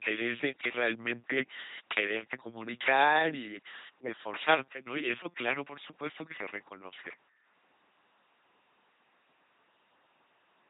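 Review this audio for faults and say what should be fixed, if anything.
The whole clip, start to finish, has that buzzy, mechanical robot quality of an LPC-10 vocoder, and it's heavy. Each moment gets rebuilt as either pure buzz or pure hiss pushed through a short vocal tract filter, so the natural mix of voiced and breathy sound is gone. Nothing survives above about 3.9 kHz, and the overall crudeness fits a 2.4 kbit/s LPC-10 stream. To prevent it, send the speech through a modern wideband codec at a higher bitrate.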